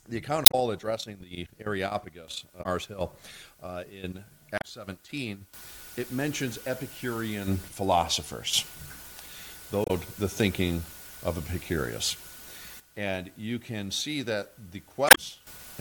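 Damaged data in a compressed stream causes brief glitches at 0.43–0.55, 2.62–2.66, 4.58–4.65, 9.83–9.90 and 15.06–15.18 s, where corrupted frames are misdecoded while the decoder regains sync.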